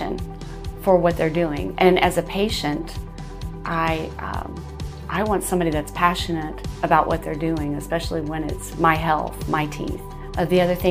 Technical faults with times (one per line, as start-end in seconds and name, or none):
none